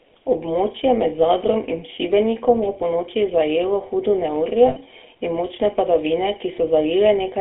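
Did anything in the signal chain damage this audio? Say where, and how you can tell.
Yes. Before encoding, one channel ran a fraction of a millisecond behind the other and the two were summed to mono. That channel delay produces comb filtering throughout: fixed, evenly spaced notches starting around 1.5 kHz, which give the speech a hollow, phasey colour.

The call then went through the GSM full-rate codec, consistent with a 13 kbps stream. The band stops at 300 Hz and 3.4 kHz, and the coarse pulse-driven excitation leaves a plainly audible buzzy, gravelly roughness on the speech from start to finish.

On the network or radio link, GSM frames were lost from 4.68 to 4.77 s, just after "ponoči zajelo hudo neurje". The decoder held the last good frame, so the speech smears into a brief rough, metallic ring lasting 80 ms, which fits about four lost frames.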